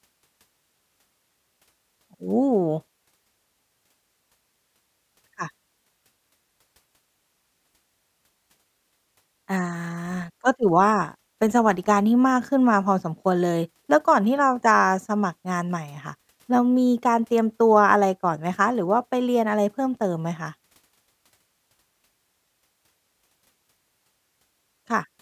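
No technical faults can be heard anywhere in this speech recording.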